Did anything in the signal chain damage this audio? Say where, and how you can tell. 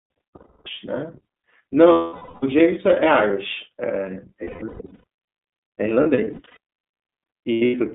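Yes. The iLBC codec squeezes the speech into a narrow band of about 200 Hz to 3.6 kHz throughout, leaving it plainly rough and synthetic-sounding.

Lost iLBC frames on the network at 0.36–0.67, 1.92–2.43, 4.44–5.04, 6.03–6.57 and 7.52–7.75 s make the decoder repeat one pitch cycle, heard as held buzzy vowels, with clean recovery straight after.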